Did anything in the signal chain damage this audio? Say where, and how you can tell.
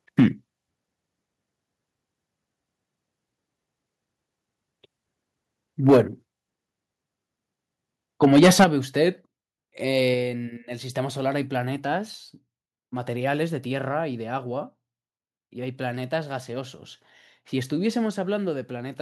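Yes. Microphone overload is audible at 0.19–0.26 s, 5.88–6.00 s and 8.23–8.65 s: flat-topped, crackling peaks, about 5, 7 and 10 dB over full scale, with a sizeable share of samples squared off. The likely cause is excess input gain driving the converter into its limit. This is unlike codec distortion, because the harshness tracks only the loudest moments.

A microphone volume stepped down fault occurs during each burst, at 0.2, 5.9 and 8.64 s, as abrupt level drops of about 2, 2 and 8 dB. The likely cause is call processing cutting device gain after detecting clipping. Unlike a compressor's smooth gain reduction, each drop happens in one step and the lower level holds afterward.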